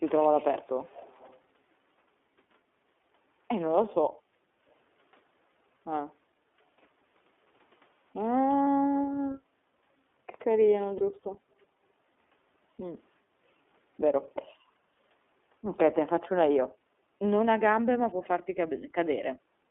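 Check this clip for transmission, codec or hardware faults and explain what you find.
There are four things going on here: the whole clip is carried over the iLBC codec, there's a short echo leak near the start, the echo canceller gates the background three times, and two iLBC frames drop out in the middle.

The iLBC codec is present throughout. The speech sits in a narrow band of roughly 250 Hz to 3.5 kHz, so there's no air or sparkle on top. Each 30 ms frame's excitation is coded on its own, which leaves the speech plainly rough and a bit synthetic. That fits iLBC's 13.33 kbps mode.

The echo leak runs from 0.62 to 1.37 s. A faint, delayed copy of the speech trails the original by about 378 ms, roughly 25 dB down. The likely cause is a far-end loudspeaker whose echo canceller didn't fully clean the mic signal, so some of the speech got sent back.

Background gating by the echo canceller happens three times: 4.2 to 4.59 s (about 15 dB deep), 14.45 to 14.6 s (about 13 dB), and 19.62 s to the very end (about 9 dB). 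Each time, the canceller clamped the mic while it thought the speaker was playing. The room tone briefly sags, then comes back the first two times; the last dip runs into the end of the clip.

The lost iLBC frames are at 8.64 to 8.67 s and 10.98 to 11.03 s, each about 30 ms, which fits a single dropped frame each time. The decoder fills the gap by repeating the last pitch cycle mixed with noise, so you hear a tiny held, buzzy vowel. Because iLBC frames stand alone, the speech snaps straight back afterwards.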